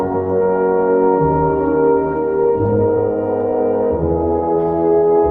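Audio coming through a WebRTC call path, and at 2.45 s there's a call bitrate drop that runs right to the end. The top end narrows from 20 kHz to 12 kHz, and the coding gets coarser, turning the sound rough, watery or muffled. That fits the encoder being told to spend far fewer bits, roughly 32 down to 18 kbps, after the bandwidth estimate fell. It sits at its worst for about 1.9 s and never recovers before the clip ends.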